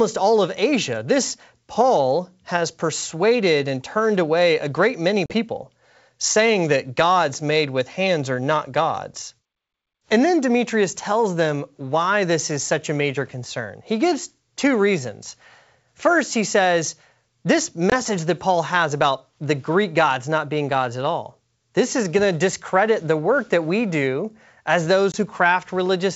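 Speech with three hard-edged silent gaps: about 40 ms at 5.26 s after "away a great many", and 20 ms each at 17.90 s after "he says this" and 25.12 s after "that we do as", each followed by briefly distorted speech. This is packet loss on an ADPCM call, with lost packets filled by silence and the decoder's predictor and step size then briefly mismatched with the sender's. The G.722 wideband coding carrying it, apparently at 64 kbit/s, adds at most a faint upper-band hiss.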